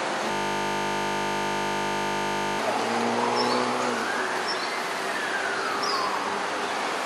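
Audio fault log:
0.31–2.59 s, system hang loop: the sound locks up into a flat, steady buzz at 50 Hz for a bit over two seconds. The machine or its driver stalled while the audio hardware kept replaying the same ring buffer. That buffer held only 20 ms of sound, so the slice repeats over a hundred times. A chunk that short repeats too fast to hear as a stutter, so the ear fuses it into a tone at the loop rate.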